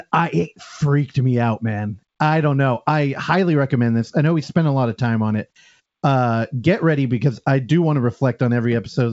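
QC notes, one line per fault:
Nothing to flag on this one: the speech comes over G.722 wideband telephone coding, which sounds like the full 64 kbit/s mode, with the top end stopping at about 7.7 kHz as that path would give it, and no faults turn up.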